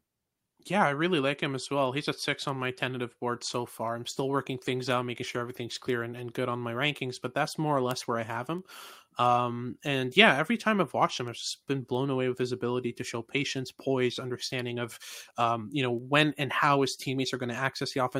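A speech clip carrying word clock ticks from about 0.51 s to 18.00 s: roughly thirty sharp ticks of uneven strength, about every 0.7 s. A receiver running on its own clock, off by roughly 30 ppm, drops or repeats one sample at each slip. Each shows as a thin full-height vertical line on a spectrogram and a one-sample step in the waveform.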